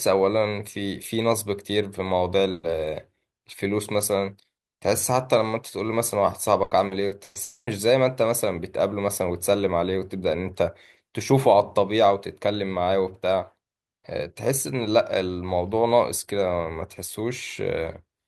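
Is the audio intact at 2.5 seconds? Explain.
No. A burst of packet loss hits from 2.51 to 2.66 s. About 120 ms went missing. The receiver stretched the last sound into a fading buzz or hiss, then skipped ahead.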